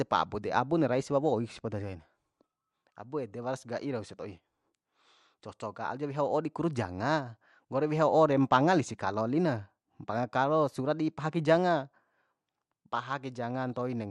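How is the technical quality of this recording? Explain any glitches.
The recording has plainly audible codec damage throughout and two brief bursts of corruption.

Throughout the clip the speech sounds dull and gurgling, most likely from MP2 compression at a low rate, which fits about 80 kbps. Layer II divides the spectrum into 32 sub-bands and rations bits among them. When bits run short, upper bands drop out entirely and the rest are quantised coarsely. On a spectrogram the top end looks ragged, with high bands blinking on and off from frame to frame.

DAB burbling occurs at 3.30 s and again at 13.74 s. Uncorrected bit errors in the MP2 stream, at a very small error rate, corrupt samples and scale factors, so individual sub-bands jump in level for up to a frame. The first burst sounds like it spans several frames and the second a few. Each is heard as a brief watery burble in the speech. 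A spectrogram shows isolated bright rectangular blocks confined to single bands.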